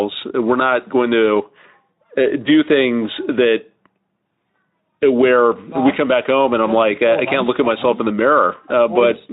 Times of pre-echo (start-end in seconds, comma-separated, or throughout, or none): none